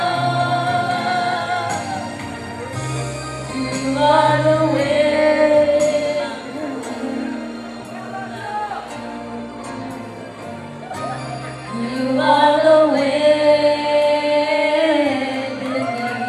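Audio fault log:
Nothing stood out on listening to this audio.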